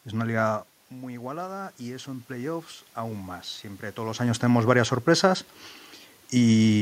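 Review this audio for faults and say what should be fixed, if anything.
From 0.93 s to 4.3 s there's automatic gain rising. The talker moves away around half a second in, the level at the mic drops by about 12 dB, and the AGC slowly pushes its gain up about 6 dB. Voice and room noise swell together, recovering only half the loss. Turn off the AGC or set a fixed input level, and keep the talker at a steady distance from the mic.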